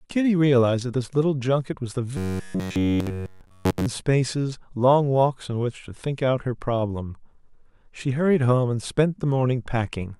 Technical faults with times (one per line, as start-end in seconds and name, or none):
2.17-3.87 robotic sound from repeated short buffers